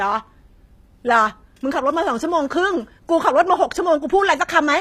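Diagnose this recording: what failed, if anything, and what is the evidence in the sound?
The fault sits at the codec stage and runs through the whole speech clip. Nothing reaches above 15.5 kHz. The treble is present but does not sound like the original. Sibilants come out gritty and metallic. The damage is plainly audible. This points to likely HE-AAC compression, consistent with v2 at a low rate near 24 kbps. The coder keeps the lower spectrum. It then rebuilds the top by copying lower bands upward, so the harmonics no longer match.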